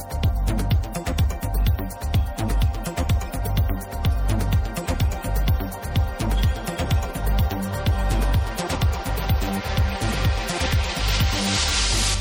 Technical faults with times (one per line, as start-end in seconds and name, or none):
none